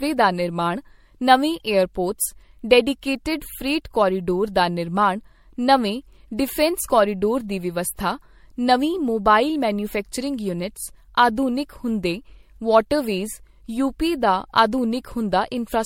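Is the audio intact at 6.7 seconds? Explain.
No. At 6.7 seconds, as across the whole clip, the speech shows generation loss, likely from being put through MP3 at 64 kbit/s about four times over. Each re-encode quantises on a shifted frame grid, so the damage stacks: the sound turns swirly and hollow, consonant attacks smear, and nothing remains above 16.6 kHz.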